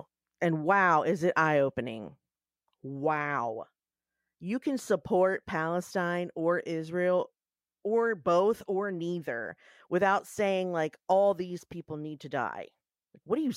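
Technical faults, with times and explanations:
Nothing stood out on listening to this speech recording.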